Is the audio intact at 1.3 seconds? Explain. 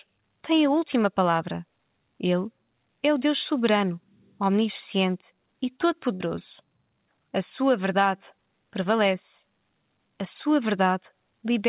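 Yes, the audio is intact at 1.3 seconds, with only the narrowband character of the call path, which leaves nothing above 4 kHz, audible there.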